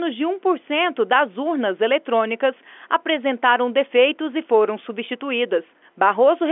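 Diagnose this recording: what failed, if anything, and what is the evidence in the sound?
No fault found in this recording.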